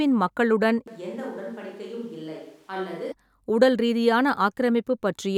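At 0.88 s the speech abruptly turns roomy and hollow, losing bass, dropping around 10 dB and exposing room noise about 30 dB below it, then snaps back at 3.12 s. That's likely a switch to a distant microphone after the close one dropped out.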